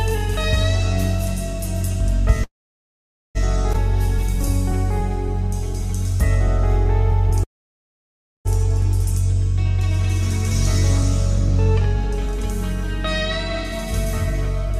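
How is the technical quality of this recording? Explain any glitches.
The recording has clear network-playback faults: two freezes, one forward skip and a stretch of slowed playback.

Call audio freeze, 2.43 to 3.37 s and 7.43 to 8.47 s: the audio halts for about 0.9 s and then 1.0 s. A brief continuation of the last sound dies away, leaving near-silence for 850 ms and 980 ms. The likely cause is delayed packets draining the jitter buffer. Playback then resumes where it stopped, so nothing is lost and only a gap is added. On a spectrogram, each freeze shows a short smeared tail and then an empty band. On the waveform, it appears as a flat line.

Skip ahead, 3.73 to 3.76 s: playback jumps forward, dropping roughly half a second of audio. The two sides are joined with only an 11 ms bridge. The stretch was dropped on the way or by the jitter buffer when it overflowed, while later audio was already waiting. 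The result is an abrupt splice. On a spectrogram, the spectral content changes suddenly at a single vertical seam, and the waveform shows a discontinuity at that point.

Jitter buffer slow-down, 4.06 to 5.90 s: playback runs at 98% speed, with 35 ms of material added by repeating single pitch periods. The buffer was running low or had just raised its target delay, and was building up a reserve. The pitch stays the same, but sounds are slightly drawn out and may warble faintly. On a spectrogram, harmonics in this stretch are marginally elongated. The waveform shows near-identical cycles repeated in short runs.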